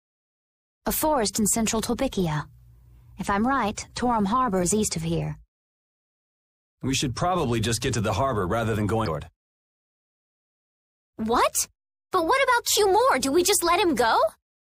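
Short bursts of damaged data in a compressed stream occur at 4.62 s, 9.06 s, and from 12.96 to 12.98 s. At each point the decoder misreads corrupted frame data and loses sync until the next valid header, producing a brief chirp or blip.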